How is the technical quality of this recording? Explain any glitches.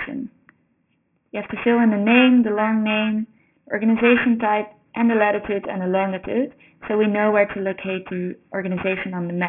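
The recording is technically poor because of one fault that runs through the whole clip. Aliasing is present from start to finish: the sound appears to have been reduced to a rate near 6 kHz with no filtering beforehand, so content above about 3 kHz folds back down as false, unrelated tones, fairly strong against the real signal. Bright parts of the audio sound gritty and metallic, and the spectrum runs hard up to the 3 kHz edge.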